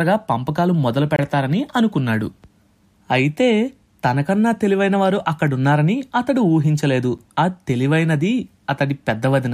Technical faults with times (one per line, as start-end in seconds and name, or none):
1.16-1.19 gap between stream segments
7.18 gap between stream segments